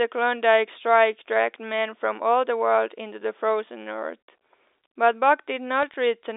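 Around 3.24 to 3.28 s, and again from 5.82 to 5.94 s, you get short bursts of crackle: bit errors on a digital phone line. The speech underneath stays intact, but a scattering of flipped bits, something like a tenth of a percent, each corrupts a single sample. Where a high-order bit, or the sign bit of a loud sample, gets hit, the sample jumps and you hear a sharp tick. The rest of the telephone-band sound, capped near 3.7 kHz by the G.711 coding, carries through with at most faint coding noise.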